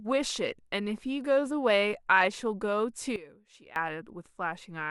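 At 3.16 s the speech and its background noise drop together by about 16 dB with no fade, stay down until 3.76 s, then return just as abruptly. This sudden gain jump likely comes from a digital gain change applied instantly rather than ramped.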